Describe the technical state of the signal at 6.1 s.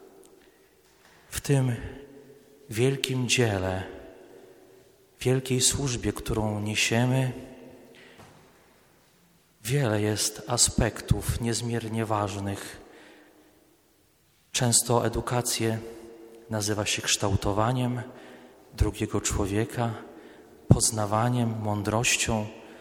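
At 6.1 s the signal is intact, with no audible dropout, distortion, glitch or other fault at that moment.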